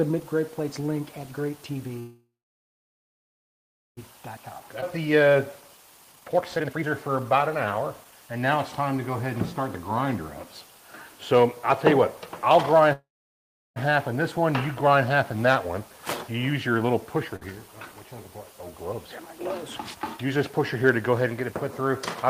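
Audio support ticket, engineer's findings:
Call audio freeze, 1.99–3.99 s. Last sound carried on as a fading buzz or hiss, then silence for about 1.7 s. Likely cause: jitter buffer underrun from held-up packets. Audio resumes where it stopped. Nothing lost. Adds about 2.0 s delay.
Call audio freeze, 12.93–13.78 s. Same pattern. Fill of 0.83 s, about 0.72 s of it silent. Resumes in place. Nothing missing. Adds 0.83 s delay.

Jitter buffer speed-up, 4.37–8.58 s. Audio hurried at 120% speed, pitch unchanged. Receiver draining excess buffered audio after a backlog. Repeated removal of short pitch-period pieces. Roughly a second cut in total.
Jitter buffer speed-up, 19.78–20.36 s. Playback at 108%, pitch unchanged, just into audibly hurried range. About 50 ms trimmed. Same buffer-reduction mechanism, much smaller correction.

Skip ahead, 4.81–4.84 s, inside the first speed-up. Playback jumps forward. 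Only a 10 ms join between the two sides. Roughly a second of audio gone. Stretch dropped in transit or on buffer overflow while later audio was queued. Cuts delay by about a second.

Short stall from a late packet, 17.36–17.43 s. Sound held too long with a buzz or dip. Packet missed its slot and the jitter buffer ran dry. Receiver stretched the last sound by 53 ms, then continued in place. Nothing missing. Adds 53 ms delay.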